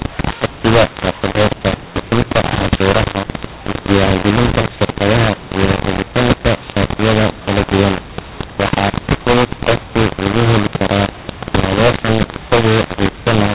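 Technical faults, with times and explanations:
Throughout, mu-law and A-law mixed up: the A-law telephone speech is decoded as mu-law, scrambling levels, so it turns harsh and pauses fill with hiss.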